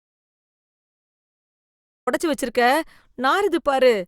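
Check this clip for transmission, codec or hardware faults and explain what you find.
An audio dropout to silence runs from the start of the clip to 2.07 s. The input was likely lost, with silence written in its place, so the speech opens in complete silence and enters mid-flow.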